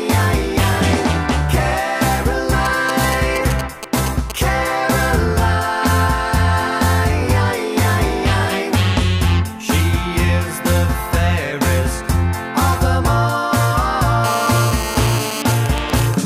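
GSM signalling bursts break into the audio from 2.65 to 4.32 s and again from 15.42 to 16.14 s. The first group is a galloping dit-dit-dit of brief 217 Hz buzzes, the second even ticks with a longer buzz twice a second, both around 10 dB below the signal. A nearby 2G phone sends short radio bursts, and the audio circuit rectifies them. The first group fits call or text signalling, the second a silent pause in a call. A GSM phone buzz runs from 14.24 to 15.42 s. It is a steady, raspy 217 Hz tone with many harmonics, about 8 dB below the signal. This is a phone transmitting in bursts 217 times a second during a call.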